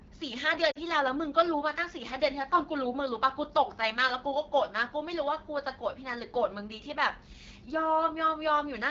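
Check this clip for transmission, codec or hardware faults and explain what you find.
Two faults are audible in this speech clip: a low-rate wideband codec throughout, and a brief dropout near the start.

AMR wideband (HD Voice) codec, throughout: the model-based coder sounds plainly rough and raspy, which points to one of its two lowest bitrates, likely around 8.85 kbit/s.

Lost AMR speech frames, 0.71 to 0.78 s: for about 40 ms, which fits two lost frames, the decoder repeats its last good settings with falling gain, causing a short dip to near silence before the speech recovers.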